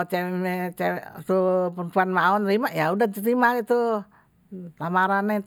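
Listening to the speech recording, nothing technical stood out at any point.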